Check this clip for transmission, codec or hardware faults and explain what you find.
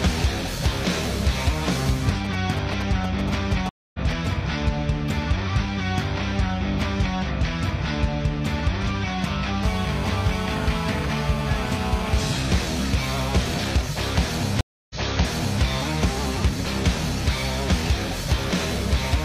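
There are three kinds of fault here, all from transmission or hardware interference.

From 1.79 to 4.27 s there are GSM signalling bursts: a nearby 2G phone is handshaking, and the audio circuitry rectifies its radio pulses. You hear a galloping dit-dit-dit of short 217 Hz buzzes, roughly 10 dB under the programme.

The stream reconnect happens twice. At 3.69 to 3.99 s the audio goes silent for 250 ms, then picks up a little later than where it dropped. At 14.61 to 15.62 s there is 292 ms of silence, and the audio resumes 725 ms earlier, so that stretch repeats. Each time the link broke and the player restarted its decoder mid-stream.

From 9.63 to 12.33 s there is GSM phone buzz. The phone is now on a call and transmitting continuously at 217 bursts per second, which gets rectified into a hard, raspy 217 Hz buzz full of harmonics. It sits about 9 dB below the signal and has nothing to do with the content.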